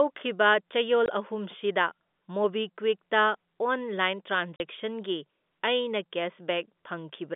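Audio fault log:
1.06–1.08 s and 4.56–4.60 s: packet loss filled with silence. The telephone-band speech drops out completely for 20 ms, then 40 ms. Lost audio was replaced by silence, so each gap starts and stops abruptly. The lengths fit a 20 ms packet.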